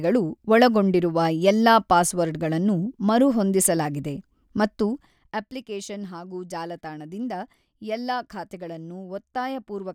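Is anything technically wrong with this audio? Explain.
Yes. Between 4.89 and 5.53 s, just after "ಮರುಹೊಂದಿಸಲಾಗಿದೆ ಮತ್ತು" and before "ಹಾಗೂ ಜಾಲತಾಣದಿಂದ", the speech drops by roughly 15 dB with zipper noise riding on it. The gain moves in tiny unsmoothed jumps, around 200 a second, and each jump leaves a small click, so the fade sounds like a fine buzzy ticking. A clean fader move glides silently, with no ticks attached.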